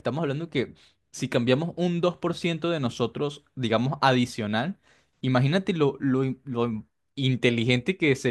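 No technical faults can be heard anywhere in the recording.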